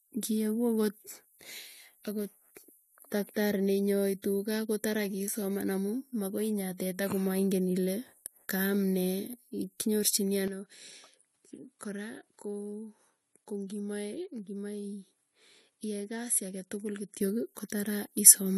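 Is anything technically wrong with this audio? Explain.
Yes. From 10.48 to 17.21 s the input likely switched to a poorer device: its narrower band removes content above 11.4 kHz, the level drops about 10 dB, and low background noise appears.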